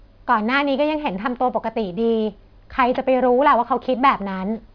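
Aliasing runs throughout: the speech is cut off hard at 5.5 kHz, where energy from above folds back as gritty, metallic sibilants, suggesting a rate drop to 11 kHz without filtering.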